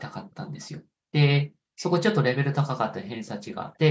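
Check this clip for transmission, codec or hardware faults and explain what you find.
One fault is audible, an echo leak, at 0.31–0.35 s, 0.59–0.70 s and 1.78–1.92 s. A loudspeaker echo likely slipped past the canceller, returning faint scraps of speech about 0.33–0.34 s late, roughly 30 to 40 dB down.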